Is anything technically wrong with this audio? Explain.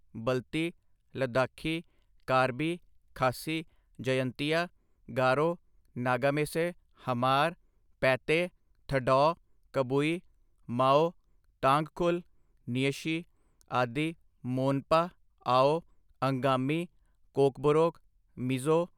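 No, nothing technically wrong jumps out here; the speech comes through without any problems worth flagging.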